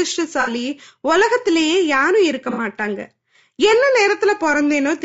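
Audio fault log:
Throughout: low-delay AAC compression. The speech sounds rough and grainy, with noise between harmonics and a thin top, likely from AAC-ELD at a low rate around 32 kbps.
0.41–0.50 s and 2.51–2.59 s: AAC frame loss with concealment. Brief smeared, noisy patches where the decoder papered over about 60 ms of missing audio each time.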